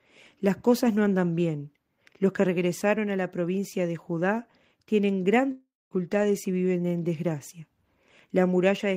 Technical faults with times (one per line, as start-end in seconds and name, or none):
5.51-5.93 long network dropout